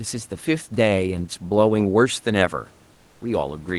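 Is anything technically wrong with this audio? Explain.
Yes, one small thing. From 2.93 to 3.21 s, comfort noise in place of the background: the real room noise gives way to a flat, featureless hiss about 5 dB quieter, likely because the sender paused transmission during silence.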